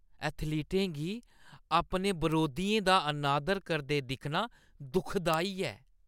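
At 2.32 s, just before "दा अनादर करदे दिक्खना", a single sharp tick cuts through the speech. This is a bit error spike. One flipped bit threw a single sample off by a power of two, then the value snapped back. It peaks at about -21 dBFS. At 5.34 s a second spike of the same kind lands, louder at about -9 dBFS. Both ticks are broadband and unrelated to the speech around them.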